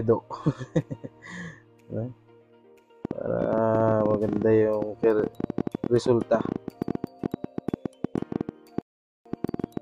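A train of clicks runs from 3.05 s to 9.78 s: some seventy near-identical pulses at roughly 11 per second, irregularly spaced and peaking around 10 dB above the audio, so they tick clearly over the sound and through its quiet moments. The likely cause is an outside source repeatedly injecting the same pulse, such as electrical interference from nearby equipment or a faulty connection or power supply. A rebuffering stall interrupts playback at 8.81 s. The audio drops to silence until 9.26 s and then resumes exactly where it stopped, adding 0.44 s without losing any material. This is the player exhausting its downloaded audio and pausing until more data arrives.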